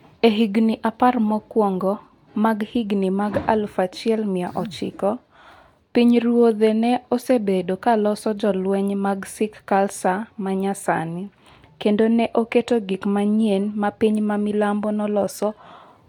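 No technical faults can be heard anywhere in the speech.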